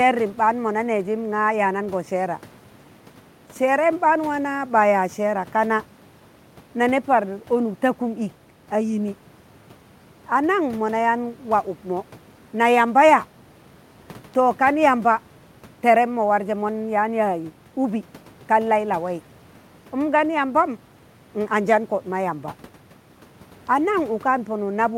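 No technical faults are present in the speech; the only background is the room's own noise, sitting about 28 dB below it.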